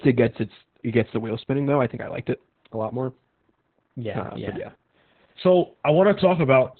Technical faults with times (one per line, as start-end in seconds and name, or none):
0.00-6.79 Opus voice compression